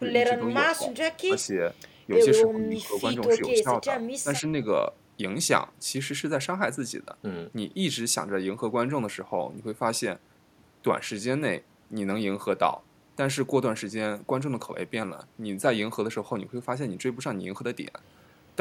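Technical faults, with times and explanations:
0.00–0.06, 0.38–0.55, 0.79–0.94, 1.28–1.37, 2.45–4.02 and 4.23–4.61 s, speech suppressed in double talk: level dips by about 5–15 dB, deepest in the long stretch, likely an echo canceller ducking during crosstalk, seen as sudden waveform notches and faded spectrogram bands.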